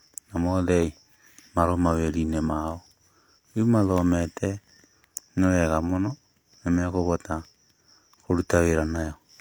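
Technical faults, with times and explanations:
No technical fault can be heard anywhere in the speech signal.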